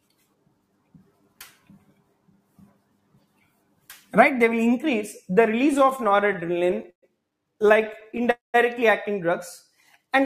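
From 0.05 to 4.13 s, the noise suppressor cuts the sound. It mistakes parts of it for noise and pulls them down, by about 18 dB at the deepest. Roughly three seconds are affected. Steady and fading parts sink or lose their tails.

Repeated stalls (stutter) follow from 5.73 to 7.04 s. The jitter buffer keeps running dry, so playback halts twenty times while the last sound is stretched. The longest hold is 124 ms, and 309 ms is filled in all. Nothing is lost, but the audio drags and jerks. A second stutter runs from 7.62 to 8.27 s, with eleven brief halts of 14 ms at most.

At 8.31 to 8.56 s, the call audio freezes. The last sound hangs as a fading buzz or hiss, then drops into 150 ms of silence. Playback resumes where it stopped, 229 ms late. The likely cause is packets held up in transit.

From 9.68 to 10.21 s, there is a jitter buffer slow-down. The receiver repeats tiny stretches to rebuild its reserve, adding 50 ms. 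The sound plays at 92% speed at the same pitch and comes out slightly drawn out.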